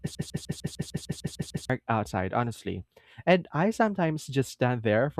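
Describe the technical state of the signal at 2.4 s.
Around 2.4 s the speech signal is intact, with no dropout, distortion, clipping or other technical fault to be heard at that point.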